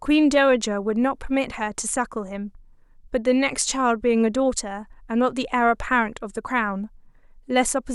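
No technical faults can be heard anywhere in the speech recording.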